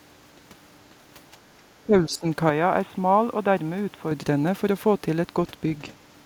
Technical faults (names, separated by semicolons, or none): speech suppressed in double talk; input switched to a poorer device